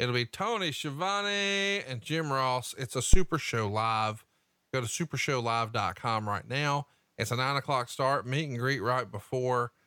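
At 3.14 s a phantom power thump breaks into the speech. A supply switching on a live input pushes a voltage step through the coupling capacitors, giving a deep thud that decays within 35 ms and is gone by 3.29 s. The waveform shows one large lopsided swing, and the spectrogram shows a dark low-frequency smear.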